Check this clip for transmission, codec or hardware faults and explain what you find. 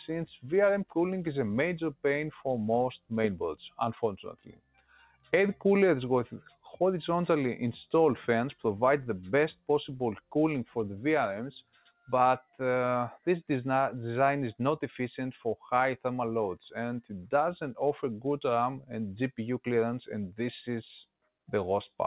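Two faults stand out, both caused by a speech noise suppressor left running on non-speech audio. The band stops at 4 kHz, which fits a G.711 mu-law call path at 64 kbps.

Noise suppressor applied to music or sounds, throughout: the suppressor treats steady tones and tails as noise and keeps pulling them down by a few decibels, so the level pumps and thins. Attacks mostly get through, which separates this from codec dropouts that hit any part of the sound.

Sound cut by the noise suppressor, at 4.3–5.33 s, 6.47–6.66 s and 11.62–12.1 s: sustained or decaying sound sinks sharply, by about 18 dB in the first two stretches and about 17 dB in the third, then recovers.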